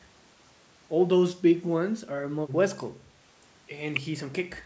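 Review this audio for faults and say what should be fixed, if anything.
Nothing needs fixing; no faults were found.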